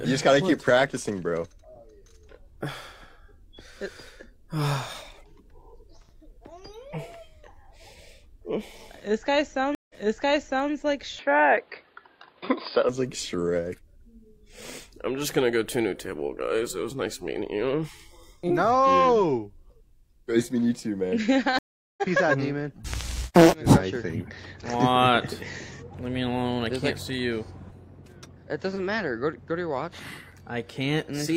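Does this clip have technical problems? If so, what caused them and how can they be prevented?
Yes. Twice the stream connection dropped and the player reconnected, starting a fresh decoder mid-stream. This is a stream reconnect. At 9.75 s the audio goes silent for 146 ms and resumes 811 ms earlier, so by 10.71 s a stretch of sound has been heard twice, which points to the server resending a burst. At 21.59 s a 390 ms silence is followed by a resume roughly 0.3 s later, so a short piece of sound is lost. Larger client buffering and a server that resumes cleanly at the exact position would prevent both.

From 11.19 s to 12.89 s the system likely switched its input to a poorer device, such as a different microphone or a headset's call profile. The sound suddenly turns dull and narrow, with nothing above 4.9 kHz. The level shifts by around 5 dB, and a new noise floor appears roughly 40 dB below the signal. 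There is no gap at the switch, so the change in tone is abrupt. Locking the recording to one fixed input device would prevent it.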